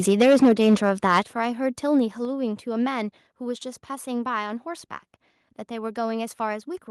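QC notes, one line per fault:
0.08–1.2 s: microphone overload, peaks flattened by about 8 dB over full scale, with several percent of samples clipped, giving harsh crackle; likely input gain set too high.
0.22 s and 1.23 s: microphone volume stepped down, level drops abruptly by about 3 dB, then about 8 dB, voice and background together; likely automatic gain control reacting to clipping.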